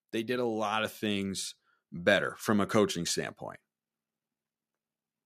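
From 0.25 s to 3.03 s the speech shows automatic gain rising: the gain control judged the input too quiet and pushed its gain up by about 9 dB over nearly three seconds, so the voice and the background noise swell together in a slow, steady climb.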